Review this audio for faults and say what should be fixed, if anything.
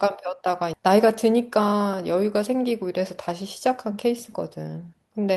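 At 0.73 to 0.81 s the speech suffers a skip ahead: roughly 0.7 s of audio is simply gone, and the two sides are butted together with only a 9 ms join and no filler. The receiver discarded a stretch of waiting audio, probably on buffer overflow, to shed that much delay. Unlike a dropout with concealment, there is no silence, smeared tail or synthetic fill, just an abrupt jump in the content. Sizing the buffer to absorb bursts would prevent this.

From 1.32 to 1.70 s a jitter buffer speed-up runs the speech at about 109 percent. After the buffer had built up excess delay, the receiver trimmed short pitch-period slices, removing roughly 40 ms over this stretch, so the speech sounds briefly hurried. A resampling speed-up would raise the pitch along with the rate, but here the pitch stays put and only the timing tightens. Smoother network delivery, or gentler, more spread-out delay reduction, would prevent it.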